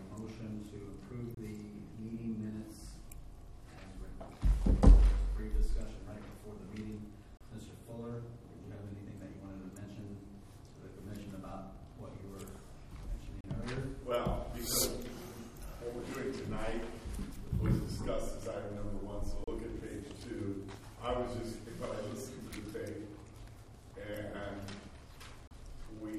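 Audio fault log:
1.35, 7.37, 13.41, 19.44, 25.48 s: gap at a join of encoded pieces. A 26–34 ms silence recurs every 6 s, where separately encoded segments meet with encoder delay and padding untrimmed.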